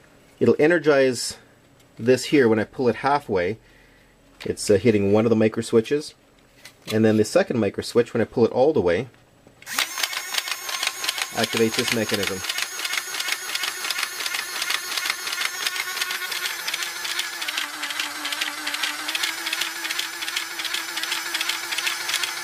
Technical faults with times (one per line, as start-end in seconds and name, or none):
17.46-19.09 wrong sample rate